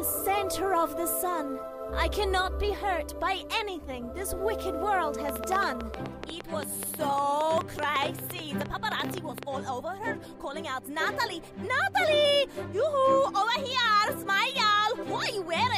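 From 5.29 s to 9.44 s a train of clicks runs over the sound: around forty sharp, near-identical pulses at about 9 per second, spaced unevenly and standing out well above the audio, by something like 15 dB. Because every click has the same shape, this is not random crackle, and it stops cleanly instead of continuing as a steady buzz. The likely cause is electrical interference or a faulty connection or power supply injecting pulses.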